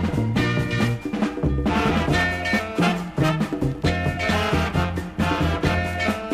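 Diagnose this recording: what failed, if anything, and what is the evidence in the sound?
Nothing in the signal points to a failure at any stage of the chain: there are no dropouts, discontinuities, level jumps or spectral oddities anywhere in the recording.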